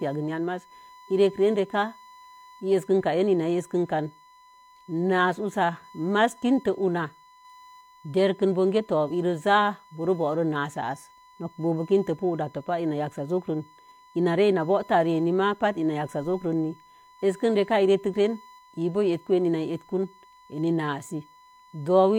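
A speech recording carrying USB whine for its whole length: a steady tone fixed at 1 kHz, strongest at that fundamental and sitting roughly 30 dB below the speech. It comes from the 1 ms USB frame rate of the bus's current draw leaking into the audio through the power or ground connection.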